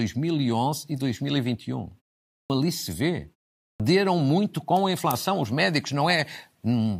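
At 2.34 s, after a pause of about 0.41 s, the speech resumes with a clipped start after a pause. Roughly 160 ms is missing, up to 2.50 s. The same happens at 3.64 s, following a 0.37 s pause, with about 158 ms lost until 3.80 s. The output device drops into a sleep state during the silence. It needs time to wake again. Meanwhile the opening sounds are swallowed, so each word bursts in abruptly.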